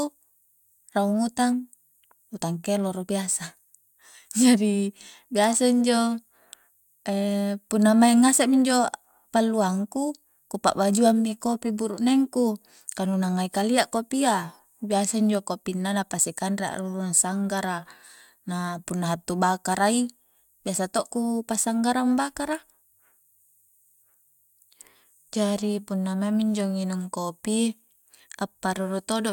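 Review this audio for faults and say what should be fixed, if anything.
Nothing to fix here; no faults are audible anywhere in the speech.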